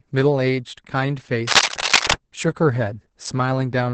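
From the start, the speech carries heavy Opus voice compression. The low bitrate, around 10 kbps, pushes the coder into its SILK speech mode and caps the band near 8 kHz. With the excitation coded that coarsely, the voice comes out muffled, hoarse and a bit robotic the whole way through.

From 1.47 to 2.13 s there's cable scratch noise: dense, ragged scratching that sits a few decibels above the speech. It's likely a worn cable or connector being moved, with its contact resistance jumping around while it shifts.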